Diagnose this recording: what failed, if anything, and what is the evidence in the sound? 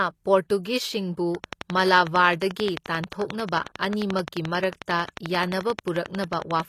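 The codec stage has damaged the whole speech clip, and the likely cause is HE-AAC compression. The damage is plainly audible, and nothing sounds above 14.9 kHz. The treble that remains is rebuilt by spectral band replication: lower bands are copied upward under a coarse envelope, so its harmonics do not line up with the band below. That points to a low bitrate around 24 kbps. Plain low-bitrate AAC would instead lose the top band outright.

A train of clicks runs from 1.35 s to 6.61 s, some seventy of them at a regular 11.2 per second, peaking at about 15 dB above the speech. The clicks have much the same shape and continue through pauses, so they do not follow the signal. That points to the analogue wiring or the power supply, with a faulty connection or nearby interference as the likely cause. Dropouts or buffer glitches would instead leave gaps tied to block timing.

Pre-echo at 4.86 to 4.88 s shows the codec stage again. 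A short hiss spreads about 23 ms ahead of a sharp attack, which sounds softened. The attack fell late in a transform block, and the quantisation noise sized for the loud part also filled the quiet moment before it. A click would be a single impulse, while this is noise leading the onset.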